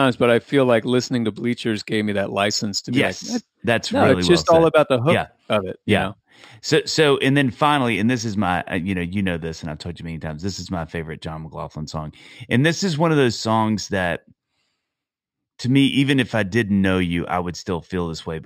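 Imaging from linear upsampling runs throughout the speech. Straight-line interpolation, which fits a rise from 12 kHz to 44.1 kHz, dulls the top and leaves faint mirror images around 6 to 12 kHz, adding metallic shimmer to sibilants.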